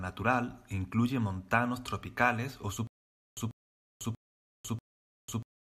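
From 2.87 s to the end, a stutter with silent gaps: the same 0.14 s fragment repeats four times, every 0.64 s, separated by about 0.5 s of dead silence, likely a stalled stream retrying. Unlike plain dropouts, the repeated identical burst gives it away.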